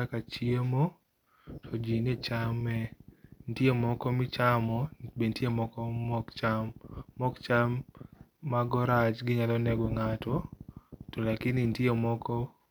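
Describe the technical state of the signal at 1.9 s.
At 1.9 s the signal is intact, with no audible fault at that moment.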